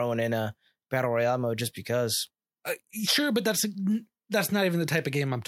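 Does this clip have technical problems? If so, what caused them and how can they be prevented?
No, no technical faults can be heard in this speech recording, so there is nothing here to trace or prevent.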